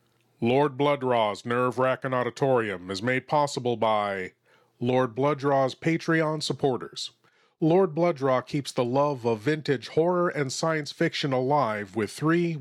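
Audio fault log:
No faults heard anywhere in the speech recording.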